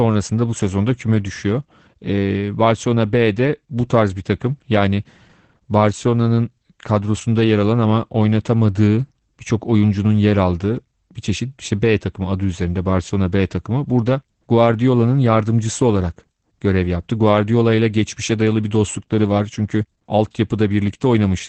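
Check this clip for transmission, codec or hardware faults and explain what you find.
One codec fault runs through the whole clip: Opus voice compression. Nothing is present above 8.6 kHz, consistent with the SILK coder's wideband mode. Band-limiting and coarsely coded excitation leave the speech plainly muffled, hoarse and slightly robotic, which fits a bitrate around 12 kbps.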